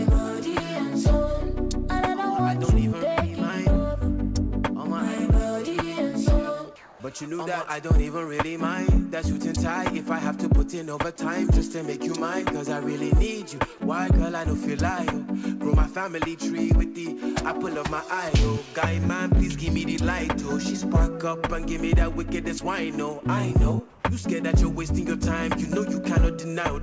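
At 6.76–7.00 s and 23.90–24.04 s, the background becomes a flat, detail-free hiss, about 1–2 dB quieter. This is likely comfort noise in place of the background; unlike a dropout, sound never stops.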